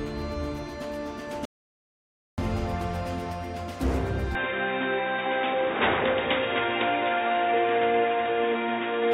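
Audio dropout to silence from 1.45 to 2.38 s: the sound cuts off abruptly and returns about 0.93 s later, with silence and no room tone in between, so that stretch is simply missing. The likely cause is a lost input while the recorder kept writing silence.

Input switched to a poorer device at 4.35 s, lasting to the end: with no gap and at much the same level, the sound turns dull and boxy, with nothing above 3.8 kHz, and a faint new noise floor appears far beneath it, likely from a change to a narrower-band microphone or headset profile.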